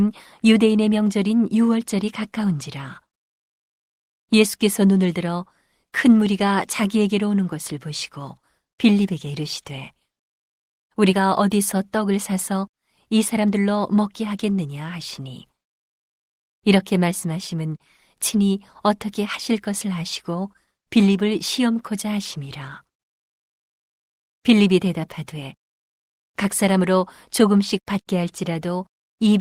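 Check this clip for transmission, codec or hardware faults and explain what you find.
No faults found.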